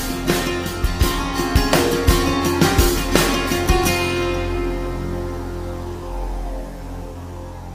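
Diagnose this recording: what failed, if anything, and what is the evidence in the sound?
Nothing in this recording failed.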